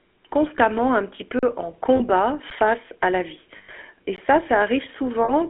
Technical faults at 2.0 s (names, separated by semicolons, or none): GSM full-rate codec; lost GSM frames